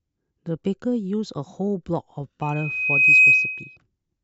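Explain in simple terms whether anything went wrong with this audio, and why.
Loudspeaker feedback squeal from 2.42 to 3.77 s: the microphone picked up its own speaker, and a 2.5 kHz tone swelled within about a second into a piercing whistle over the speech.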